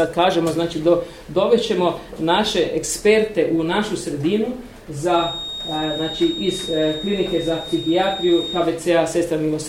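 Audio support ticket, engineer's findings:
Feedback whistle, 5.05–8.70 s: thin, steady tone at 3.7 kHz, roughly 10 dB under the programme, level swelling and fading slowly. Spectrogram: one narrow horizontal line at 3.7 kHz across that span. Likely cause: speaker-to-mic loop at edge of feedback, single frequency sustaining without running away.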